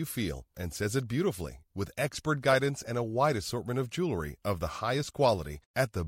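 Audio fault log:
Nothing to log here: I listened through this bit of speech and heard no technical problems at all.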